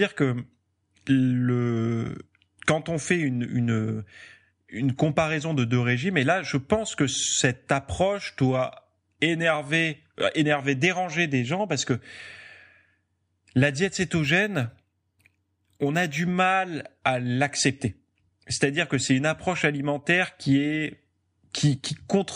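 Speech. From 14.24 to 16.35 s, right after "la diète", there is imaging from linear upsampling. The top end dulls, and a faint metallic shimmer rides on sibilants. This fits a 22 kHz stream raised to 44.1 kHz by straight-line interpolation, leaving mirrored energy from 11.0 kHz to 22.1 kHz, roughly 35 dB down.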